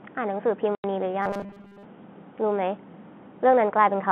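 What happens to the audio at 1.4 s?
At 1.4 s the speech is inside a stretch of robotic sound from repeated short buffers, running from about 1.22 s to 1.85 s. It is a rigid, metallic buzz at 200 Hz that loosely tracks the speech. That pitch points to a segment about 5 ms long being replayed over and over. The likely cause is new audio arriving too seldom, so the playback side repeats that last chunk and skips most of the real signal across the span.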